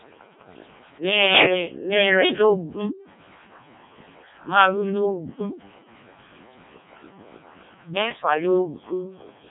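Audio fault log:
throughout, Codec 2 vocoder: the speech sounds heavily robotic and buzzy, with nothing above 3.8 kHz. The decoder rebuilds it from sine waves using only pitch, voicing, energy and a rough spectral shape, discarding the real waveform; damage this heavy points to the lowest-rate 0.7 kbit/s mode.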